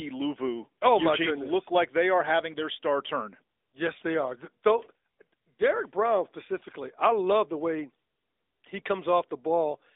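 Speech, and the whole thing has been through the AMR narrowband mobile codec: nothing gets past about 3.6 kHz or below 300 Hz, and the plainly audible buzzy, synthetic edge on the voice points to one of AMR-NB's middle modes, around 10 kbps.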